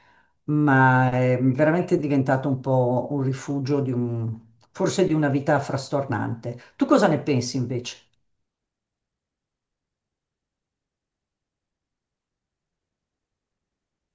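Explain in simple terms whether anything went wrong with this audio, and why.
Nothing went wrong here; no faults can be heard.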